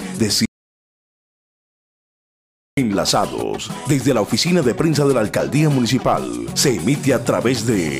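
The input likely cut out while recording continued, an audio dropout to silence from 0.46 to 2.77 s: the sound stops dead, leaving total silence.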